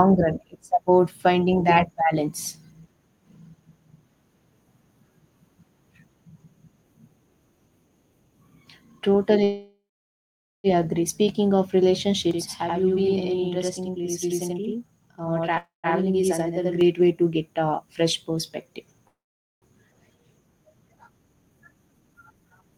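Speech that stalls three times, at 9.43 to 10.67 s, 15.57 to 15.87 s and 19.08 to 19.65 s, each stall trailing off as a fading buzz or hiss into silence before the audio resumes exactly where it stopped. These are call audio freezes, likely from delayed packets draining the jitter buffer. From 12.31 to 16.81 s a same-level slap echo about 85 ms late doubles the sound, a channel delay (doubling) consistent with one channel lagging by a 4096-sample buffer before the mono sum. From 20.88 s to the end the speech turns hurried, running about 113% speed at unchanged pitch. This is a jitter buffer speed-up, with roughly 0.3 s trimmed away in pitch-period slices.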